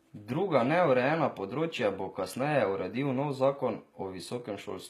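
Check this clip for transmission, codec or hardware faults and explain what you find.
One codec fault runs through the whole speech clip. HE-AAC compression, heard throughout, likely explains it: treble is rebuilt from copied lower bands, so sibilants sound gritty and metallic, nothing passes above 14.9 kHz, and the damage fits a bitrate near 20 kbps.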